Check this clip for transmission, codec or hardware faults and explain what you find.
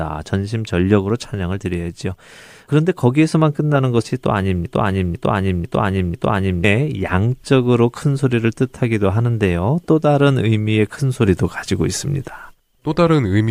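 One fault is present, a broken-record loop from 4.66 to 6.64 s. The player or stream likely stalled and kept resending its last buffered fragment, so a 0.5 s piece of speech repeats four times back to back, and the speech that belonged there is lost.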